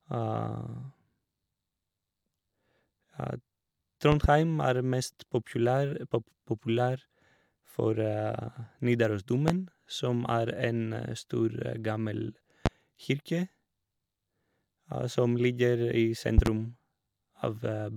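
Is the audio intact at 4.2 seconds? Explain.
No. At 4.2 seconds the speech is hit by a loud pop, running from 4.12 to 4.27 s. Two sharp pops land in quick succession, peaking roughly 15 dB above the speech, which carries on underneath. The likely cause is a sudden voltage step or pulse, from a plug, a switch, static or a driver glitch, entering the signal chain. The circuits downstream shape that pulse into the thump heard here.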